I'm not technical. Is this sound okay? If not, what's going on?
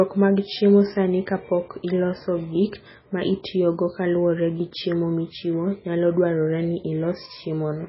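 No. The speech has MP3 compression damage from start to finish, likely from saving at a very low quality setting. Everything above about 5.6 kHz is gone, so it sounds dull and muffled, with a watery, swirling quality, metallic chirps on s sounds and smeared word starts.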